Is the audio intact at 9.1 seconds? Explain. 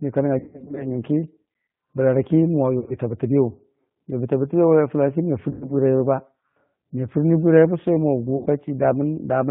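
No. G.729 codec damage runs throughout, including 9.1 s: speech rebuilt from a vocal-tract model and sparse pulses, fitting an 8 kbit/s coder, sounds rough and synthetic, not merely band-limited.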